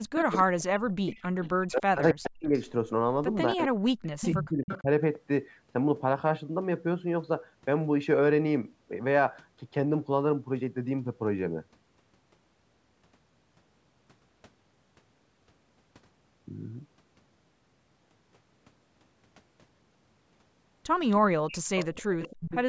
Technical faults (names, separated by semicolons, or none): speech suppressed in double talk; echo leak